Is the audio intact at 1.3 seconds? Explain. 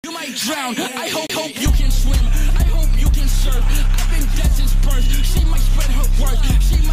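No, a CD skip runs from 1.27 to 1.30 s, ending right at that moment. A knock or a flaw in the disc threw the laser onto a different turn of its spiral, so the player muted for about 30 ms and then carried on from another place. It is heard as a tick and an abrupt jump in the sound. On a waveform there is a short flat gap followed by a discontinuity, and a spectrogram shows a thin vertical break.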